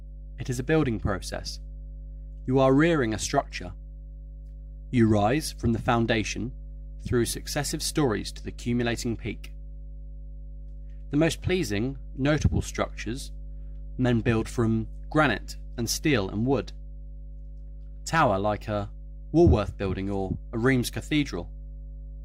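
Mains hum runs throughout the audio, a steady low tone at 50 Hz, fairly prominent relative to the signal, from power-line interference such as a ground loop or nearby transformer.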